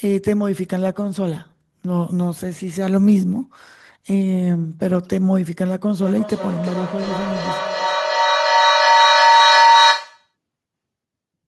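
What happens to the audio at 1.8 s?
Nothing goes wrong at 1.8 s; the speech runs through that moment intact, with no dropout, click or distortion.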